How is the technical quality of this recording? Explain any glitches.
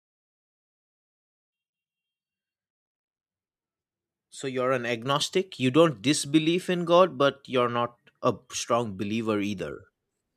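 No glitches to report here; the speech simply eases in with a smooth fade from the very beginning up to about 5.06 s, the sort of gentle fade-in an editor would add, with no click or hard edge anywhere.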